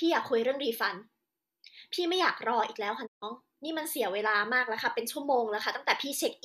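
At 3.05 s the speech fades out within 20 ms: a digital broadcast dropout. The receiver muted on bad frames. Sound resumes at 3.24 s.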